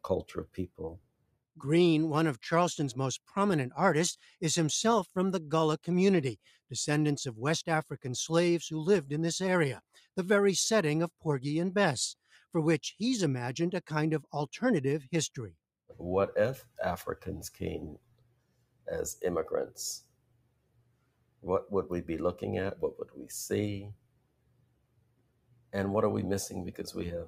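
A noise suppressor meant for speech is left running over this sound, pumping its level by around 20 dB and showing on a waveform as a breathing envelope with sustains and tails carved away. Specific stretches are cut by the noise suppressor at 0.0–1.6 s, 5.83–6.71 s, 9.93–10.17 s, 12.16–12.54 s, 15.53–16.01 s, 16.62–21.46 s, 23.0–23.23 s and 23.94–25.74 s, dropping by up to about 21 dB. These cuts are longest around 17–21 s. On a spectrogram they appear as dark, hollowed gaps between intact onsets.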